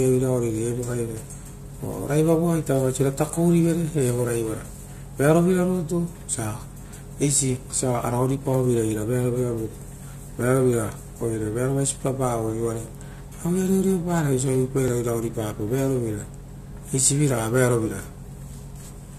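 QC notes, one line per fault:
12.88 s and 14.88 s: overlap between stream segments. Two neighbouring segments claimed the same stretch of time, so the player trimmed under 20 ms of speech that wasn't actually doubled, leaving a waveform jump heard as a tiny skip, exactly 2 s apart, matching the segment length.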